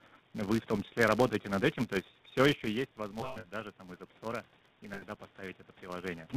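This speech recording carries plainly audible GSM full-rate codec damage throughout, consistent with the 13 kbps full-rate coder. The vocal tract is modelled and driven by a coarse, regularly spaced pulse excitation, so the voice sounds buzzy and gravelly. On a spectrogram, energy stops sharply at 4 kHz, and harmonics look smeared and grainy rather than cleanly striated. A second constant fault is a filter restarted on every block. Each block starts from an empty state, so its first samples carry a small transient, heard as a 172 Hz buzz that rises and falls with the speech level, which fits a 256-sample block. The waveform shows tiny repeating discontinuities at that spacing, and the spectrogram shows faint vertical lines or a 172 Hz harmonic comb tracking loudness. Lost GSM frames appear three times. The first is a roughly 20 ms hold at 1.42 to 1.45 s, between "вы в том числе" and "над этим то есть". 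The second is a scattered stretch from 3.2 to 3.46 s, between "есть все еще есть" and "даже там из", with the longest run around a tenth of a second. The third is at 4.94 to 5.03 s. In each case the last good frame is replayed, producing a rough metallic ring that shows as frozen, repeated spectral slices.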